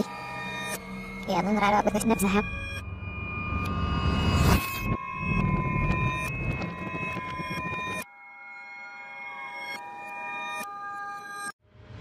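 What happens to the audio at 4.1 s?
At 4.1 s the audio is affected by a wrong sample rate fault that spans the whole clip. Everything runs about 1.38 times fast and sits about 5.6 semitones high, which fits 32 kHz material played back at 44.1 kHz without conversion, so pitch and tempo rise together.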